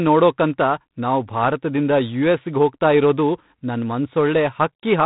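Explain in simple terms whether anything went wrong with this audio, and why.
Something did go wrong. The speech has been squeezed through G.726 ADPCM, an old telephone codec, from start to finish. Instead of storing each sound sample in full, it stores only a few bits describing how much the signal differs from a running guess. With so few bits, the guesses are coarse, leaving a harsh, rasping hiss that rises and falls with the voice. Everything above 4 kHz is also gone, so the speech sounds dull and phone-like.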